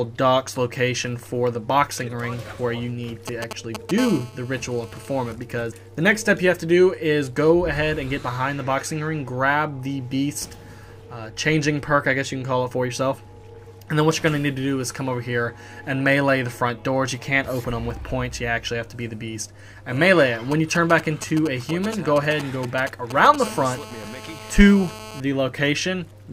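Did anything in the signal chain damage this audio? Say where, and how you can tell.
Yes. GSM signalling bursts: galloping ticks and short 217 Hz buzzes at 3.28–4.0 s, nearly as loud as the audio, and 20.5–23.4 s, somewhat quieter. A nearby 2G phone's radio bursts are rectified in the analogue wiring.

GSM phone buzz: a steady, raspy 217 Hz buzz rich in harmonics, about 16 dB below the signal, at 4.0–5.3 s and 23.4–25.2 s. The same analogue pickup occurs while the phone transmits in bursts 217 times a second during a call.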